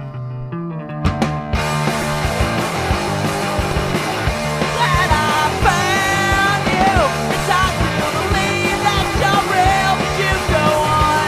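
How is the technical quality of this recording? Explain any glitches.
Two brief glitches mar the recording. At 2.02 s and again at 9.13 s there is a tiny click-like buzz, a repeated buffer: delivery ran late, so the device replayed its last 5.8 ms block, which fits a 256-sample buffer. It played three times at 2.02 s and twice at 9.13 s, with hard joins.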